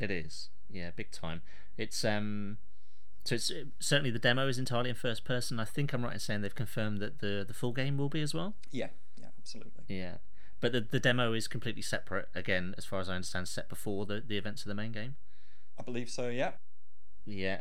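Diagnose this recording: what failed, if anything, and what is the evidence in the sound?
The analogue input or converter stage added a DC offset, shifting the whole waveform off zero by a constant of about -31 dBFS throughout the speech. It produces no audible tone, but it eats headroom and sits as steady energy at the spectrum's very bottom.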